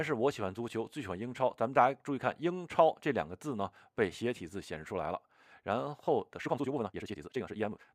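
From 6.35 s to the end at about 7.94 s, the audio turns rushed: a time-stretched section running about 1.86 times faster with unchanged pitch, likely from software dropping short segments to shorten it. A spectrogram keeps the same frequency bands but packs events tighter, and the waveform shows a compressed envelope with small seams where pieces were joined.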